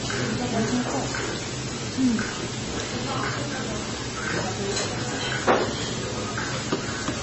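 From the first second to the end, a loud, steady hiss sits over the sound. This is low bit depth with dither. The signal keeps very few levels, which fits about 5 bits. Dither turns the rounding error into even white noise, nearly as loud as the sound itself.

Throughout the clip, nothing is heard above 8 kHz, so the top end sounds dull and cut off. The remaining sound is watery and swirly, with detail flickering in and out. The likely cause is heavy MP3 compression at a very low bitrate, around 22 kbps.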